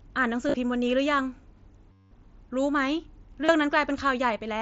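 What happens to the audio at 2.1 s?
A buzzy, steady tone holds at full level, then a slight warble as the real sound resumes at about 2.12 s. This is concealed Bluetooth headset packet loss running from 1.92 to 2.12 s, roughly 190 ms. A run of voice packets between headset and phone went missing, and the receiver bridged the gap by repeating the closest-matching stretch of the last few tens of milliseconds. Looping that short piece gives the buzz.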